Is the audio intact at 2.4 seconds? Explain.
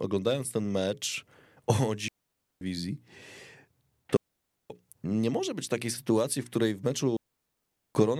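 No. A digital wireless dropout runs from 2.08 s to 2.61 s, covering the 2.4 s mark. For about 0.53 s the radio link between transmitter and receiver lost more data than it could correct, so the receiver muted its output instead of passing on corrupted audio. The speech simply disappears into a clean hole of near silence, entered and left through a very short fade, with no crackle or noise burst on either side.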